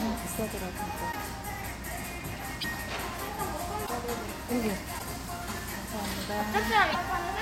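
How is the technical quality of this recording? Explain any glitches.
Five short glitches interrupt the recording, at 1.11, 2.60, 3.85, 4.98 and 6.91 s, each about 44 ms long. The likely cause is a broken MP3 bit reservoir: frames were lost, so the frame that followed reached back for borrowed data and decoded the wrong bytes instead. Each frame here spans 26.1 ms, so the damage covers under two frames. At each point the sound skips ahead and a brief chirp, burst of noise or short hole replaces the audio.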